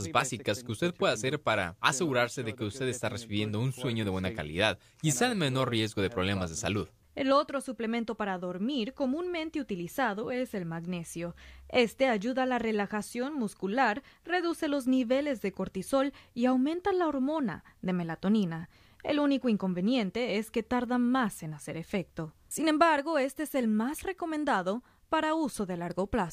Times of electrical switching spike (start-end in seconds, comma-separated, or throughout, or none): 18.43, 23.99-24.01